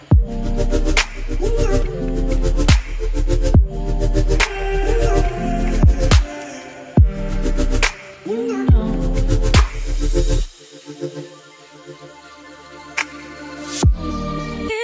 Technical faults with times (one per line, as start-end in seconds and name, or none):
none